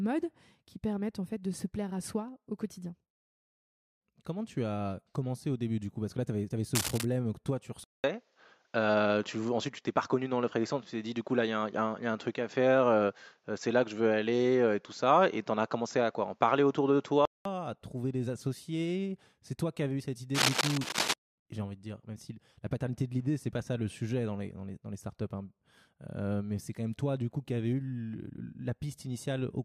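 A worn cable, connector or control was likely moved twice during this speech recording, its contact resistance jumping about and injecting cable scratch noise: dense, uneven scratching bursts from 6.75 to 7.05 s at about the level of the speech, and from 20.34 to 21.14 s somewhat louder than the speech. Between these, the recording input was likely switched to a poorer device at 7.84 s. After a gap of 200 ms, the speech returns band-limited with nothing above 7.6 kHz, so it sounds duller and boxier. The level shifts modestly, and a faint new background noise sits well below the speech. This continues until 17.45 s, when the fuller sound comes back.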